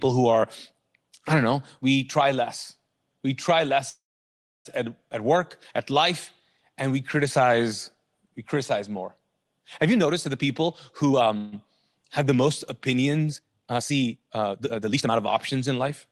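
Speech over a call connection, with the top end limited to about 12 kHz as fits Opus at around 20 kbps, breaks up four times. From 3.89 to 4.67 s the sound hangs as a short fading buzz, then drops to silence for about 0.65 s before resuming exactly where it stopped. This call audio freeze was likely caused by delayed packets draining the jitter buffer, adding a gap without losing anything. From 9.87 to 11.37 s the speech runs hurried at about 124% speed with unchanged pitch. This is a jitter buffer speed-up: the receiver trimmed roughly 0.4 s in many tiny pitch-period cuts to shed the backlog. Right after, at 11.37 to 11.54 s, a brief buzzy hold with no silence marks a second, shorter freeze of the same kind. From 13.27 to 15.13 s the pace jumps to nearly double, about 1.93 times, while the pitch holds, sounding rushed. This is a time-stretched section, likely from software squeezing the audio to fit a length by dropping short pieces.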